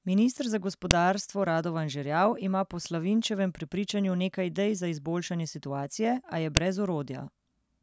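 At 0.91 s a sharp, loud click cuts into the speech. Another hits at 6.57 s. Each is a file header played as audio. Separate WAV pieces were joined or streamed with their headers left in. Those few dozen header bytes are read as sample values. They form a brief, hard snap at the start of each new piece. The click ignores the speech level at that moment.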